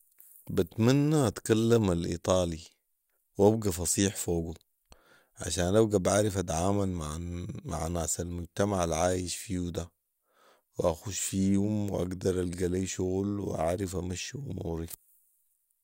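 No technical faults are audible anywhere in the speech.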